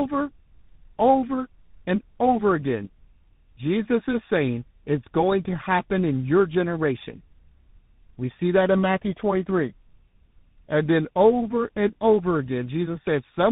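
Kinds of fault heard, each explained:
Tandem speech coding: the speech was decoded and re-encoded across GSM full rate, G.711 mu-law and CVSD links, so two speech coders in a row each worked on the already degraded output of the last. Roughness and warble stack beyond any single codec, and nothing remains above 3.8 kHz.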